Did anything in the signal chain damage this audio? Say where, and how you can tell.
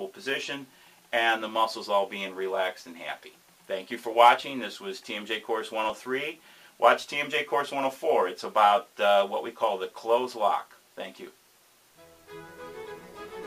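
Yes. Jumps at 5.90 s and 7.04 s suggest a dropped buffer (overrun), likely at the driver. Roughly 10 ms and 5 ms are skipped, leaving waveform discontinuities and thin vertical spectrogram lines.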